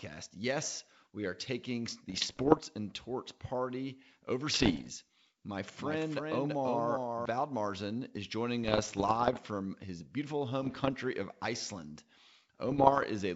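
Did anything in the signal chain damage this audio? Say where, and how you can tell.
Yes. Bit errors on an ADPCM link appear as pops and rough bursts at 2.10–2.59 s (after "we are taking"), 4.54–4.91 s, 8.64–9.38 s (before "from his beautiful"), 10.61–10.94 s (after "from his beautiful") and 12.69–13.05 s. Flipped bits, around one in a hundred, knock the G.722 decoder's step size and predictor off track, so each error rings on briefly with jumps in level.

A doubled audio track runs from 5.78 to 7.26 s. A second full-band copy trails the original by about 300 ms at about 5 dB lower, with no decay or room colour, and it switches in and out abruptly. The likely cause is a slower second capture path or an edit that left two copies mixed.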